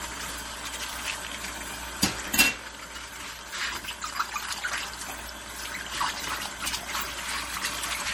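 Throughout the clip the sound is plainly damaged by coding. It turns watery and swirly, with metallic chirps on bright parts and smeared attacks. The likely cause is MP3 compression at a low bitrate, which fits roughly 48 kbps.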